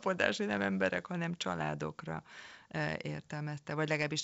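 No technical faults are audible.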